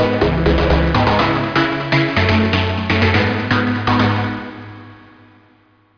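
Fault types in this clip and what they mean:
No technical faults can be heard in this recording.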